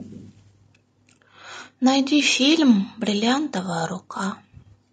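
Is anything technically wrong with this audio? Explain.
Yes. Throughout, the speech sounds rough and grainy, with noise filling the gaps between pitch harmonics and a lowered or synthetic top band. This is likely low-delay AAC compression: short frames blur harmonics, fitting a 32 kbps budget.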